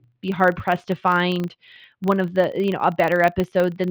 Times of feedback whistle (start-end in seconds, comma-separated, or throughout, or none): none